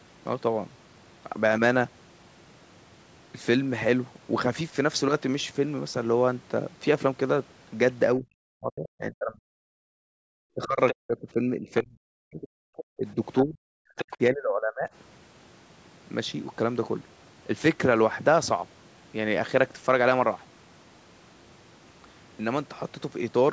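From 8.17 to 9.58 s the talker's speech dips and breaks up, sinking by as much as about 40 dB, most likely speech suppressed in double talk: with both sides talking, the echo canceller treats the near voice as echo and pulls it down. Unlike a network dropout, the loss follows the far talker's activity rather than cutting cleanly to silence.

At 9.86 to 10.27 s the room sound itself drops by about 40 dB for roughly 0.4 s and then returns. This is background gated by the echo canceller: the canceller clamps the microphone while the loudspeaker plays. It differs from double-talk suppression because no near speech is being hit, only the ambience.

The same double-talk suppression returns from 10.55 to 12.41 s and from 12.97 to 14.89 s, again with drops to around 40 dB below the talker.

Inside and between those spans, the other side's voice leaking through is heard as short scraps at 10.88 to 10.95 s and 11.76 to 11.81 s. 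It is heard for longer from 12.41 to 12.84 s and from 13.97 to 14.17 s. These sit roughly 10 to 20 dB below the talker, so they are audible as a second, fainter voice rather than reverb. The likely cause is residual loudspeaker echo the canceller failed to remove.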